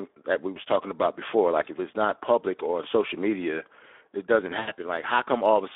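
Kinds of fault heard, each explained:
Speex codec: The speech sounds hoarse and grainy throughout, confined to a narrow telephone-like band of about 300 Hz to 3.6 kHz. This fits a CELP speech coder running at a low rate near 11 kbps, with too few bits to describe the excitation cleanly.
VoIP packet loss concealed by the speech codec: Just after "social media it doesn't", from 4.59 to 4.72 s, the sound is stretched and fades for about 80 ms. Lost packets forced the decoder to extend its last pitch and filter at falling gain.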